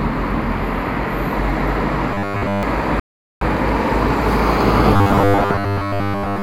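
From 2.14 to 2.63 s the audio takes on a rigid 100 Hz buzz, robotic sound from repeated short buffers, likely caused by one 10 ms block being looped while most of the real audio is skipped.

From 3.00 to 3.41 s a rebuffering stall cuts the sound to silence; playback then resumes exactly where it stopped, adding 0.42 s with nothing lost.

From 4.94 s to the end, the same 100 Hz metallic buzz returns, likely from 10 ms buffers being repeated in place of most of the incoming audio.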